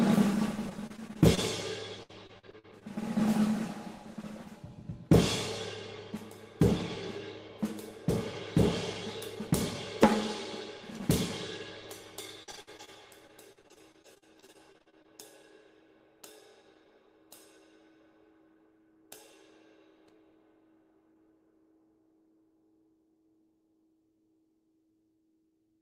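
Packets were lost or arrived late again and again, and each hole was patched by stretching the sound just before it. This repeated packet loss gives a choppy, robotic quality with fragments missing. It occurs from 0.69 to 1.39 s, then from 2.03 to 2.83 s, from 12.43 to 12.89 s, where roughly two-fifths of the stretch is patched, and longest from 13.27 to 15.06 s. Individual holes run up to about 60 ms.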